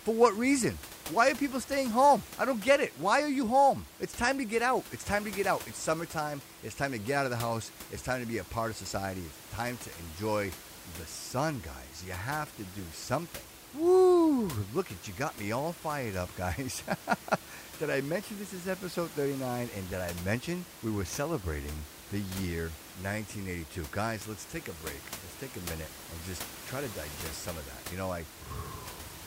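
Nothing goes wrong in this speech recording; the only thing under the talking is a bit of room noise sitting about 16 dB below it, and that's just the room the microphone was in.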